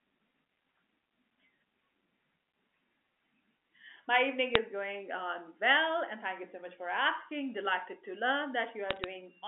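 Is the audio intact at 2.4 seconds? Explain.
Yes, the audio is intact at 2.4 seconds: no fault occurs there, and the speech comes through the G.711 telephone coding as an ordinary narrowband line would carry it.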